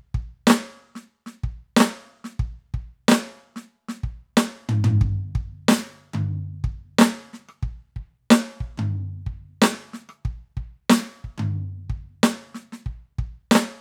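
Nothing goes wrong in this piece of music at any point; there are no technical faults to point to.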